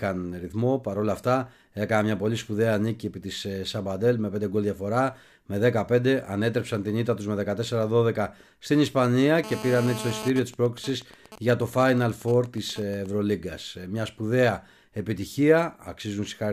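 From 9.44 to 10.29 s a GSM phone buzz sits about 10 dB below the speech: a nearby handset in a call is pulsing at 217 Hz, rectified into a harsh, harmonic-rich rasp. From 10.30 to 13.06 s it becomes GSM signalling bursts, quieter even ticks with a longer buzz twice a second as the phone transmits only intermittently while its user stays silent.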